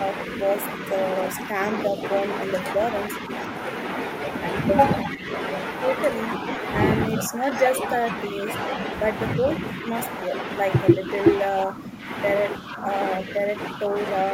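The speech dips briefly at 1.88 to 2.02 s and 5.04 to 5.28 s, with the loudness drop reaching about 5 dB and then about 10 dB. This is speech suppressed in double talk, likely from an echo canceller that heard both sides at once, could not tell its own talker from loudspeaker echo, and turned everything down. On a waveform the envelope sags in short notches. A spectrogram shows the energy thinning.

A longer stretch from 7.10 to 8.46 s has patchy dips of about 5 dB totalling roughly 0.7 s. Inside it, at about 7.56 s, comes a faint echo leak. A delayed copy of the voice arrives 313 ms late at about 20 dB below the speech, likely because the loudspeaker side's echo canceller let part of its loudspeaker pickup back through. On a spectrogram it shows as a pale, brief smear repeating the speech pattern a third of a second later.

Suppression returns at 9.39 to 10.34 s and 10.95 to 11.09 s, about 5 dB each. 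It is heaviest from 11.64 to 13.95 s, where roughly a second in total is cut by up to about 10 dB, leaving a waveform full of gouges and a spectrogram with intermittent dips.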